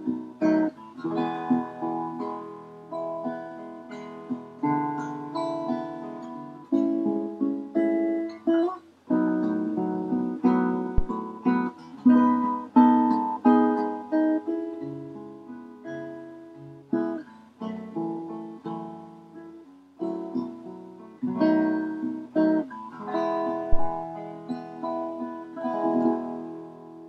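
Two phantom power thumps interrupt the audio, at 10.98 to 11.08 s and again at 23.73 to 23.93 s. Each is a deep low-frequency thud peaking at about -8 dBFS, the first decaying in 22 ms and the second in 47 ms. The cause is a supply being switched on a live input, so the sudden DC step passes through the coupling capacitors and reaches the signal path as a single low-frequency pulse.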